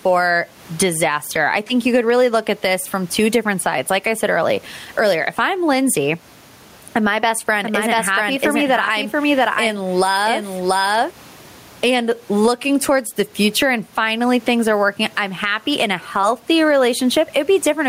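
Gain pumping runs through the whole recording, with a level swing of around 15 dB. Loud and quiet syllables sit unnaturally close together, giving a flattened, squeezed sound. The likely cause is input gain set far too high, with a fast limiter or compressor clamping down on every loud sound and releasing in the pauses. The room noise sits about 37 dB below the speech.

From 7.62 s to 11.10 s, just after "and my best", a doubled audio track appears. A second full-bandwidth copy of the speech trails the original by roughly 0.7 s at about 5 dB lower level. It has no reverberant tail or room colouring, and it cuts in and out abruptly at both ends. This likely comes from the same signal reaching the mix twice, once through a slower path.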